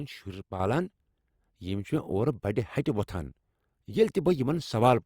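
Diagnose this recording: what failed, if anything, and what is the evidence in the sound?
A sudden gain jump at 0.60 s raises speech and background noise together by about 6 dB until the end. The likely cause is a digital gain change applied without a ramp.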